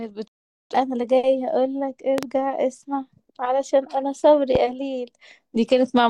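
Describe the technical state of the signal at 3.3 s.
At 3.3 s the speech signal is intact, with no technical fault present at that moment.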